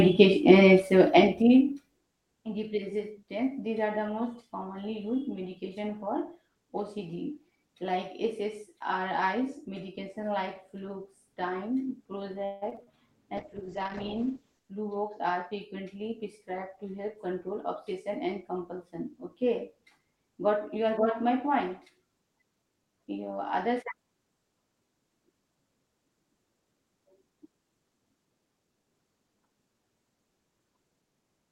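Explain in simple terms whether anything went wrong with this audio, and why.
A few things went wrong, all typical of a shaky call connection.

From 12.45 to 12.98 s there's repeated packet loss, which gives a robotic sound. Four chunks of audio went missing, the longest about 160 ms. The receiver filled each hole by stretching the last bit of sound, so about half of that half-second is patched-over guesswork. That's why it sounds choppy and robotic.

Right after, from 13.39 to 15.67 s, there's a call bitrate drop. The connection's estimated bandwidth fell, so the encoder squeezed the speech into far fewer bits for about 1.2 s at its worst. The speech turns rough and muffled and loses its crisp top end until it recovers just before "prescribed to help control".

There are also two jitter buffer speed-ups. Delayed audio piled up, so the receiver trimmed tiny slivers to catch up. From 14.74 to 15.75 s it runs about 7% fast, cutting roughly 70 ms. 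From 22.55 to 23.15 s it runs about 15% fast, cutting roughly a tenth of a second. The pitch stays the same, but the talking sounds briefly hurried.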